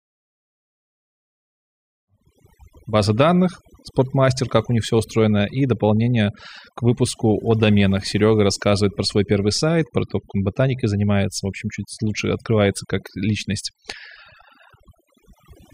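Overdone noise removal affects the whole speech recording. The reducer was pushed too far. Any band sitting close to its noise estimate gets cut deeply, and soft speech detail goes too. Between phrases, near silence is left, speckled with chirping artefacts. The effect continues through the smooth fade-in from about 2 s to 2.64 s.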